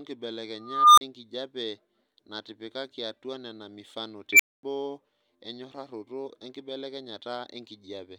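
At 0.60–1.01 s and 4.33–4.63 s, an unstable filter runs away in the speech: a tone near 1 kHz, then 2 kHz, swells over 377 ms and 70 ms to clipping, then cuts to silence for 35 ms and 238 ms. The spectrogram shows a brightening horizontal line; the waveform shows a flat-topped swell, then a gap.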